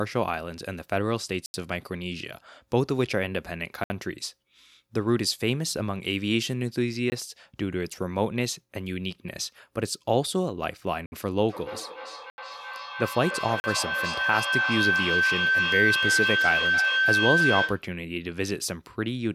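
Blocks of digital silence cut into the speech at 1.46 to 1.54 s (80 ms) and 3.84 to 3.90 s (60 ms), then at 7.10 to 7.12 s (20 ms) and 11.06 to 11.12 s (60 ms). In each, the sound cuts straight to silence and back with no fade. The shorter holes sound like ticks, and the longer ones like brief dropouts. This points to the output buffer not being filled in time.

A feedback howl starts at 11.49 s and lasts until 17.91 s. Two devices on the same call are picking each other up, so each trip from microphone to loudspeaker adds level. The sound narrows to a tone around 1.5 kHz that pulses roughly three times a second, following the loop's delay, and peaks about 2 dB above the speech.

During the howl, two more silence blocks fall at 12.30 to 12.38 s (80 ms) and 13.60 to 13.64 s (40 ms).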